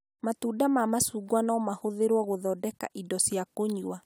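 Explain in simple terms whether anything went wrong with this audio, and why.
Listening to the recording, nothing stood out as having gone wrong with the sound at any point.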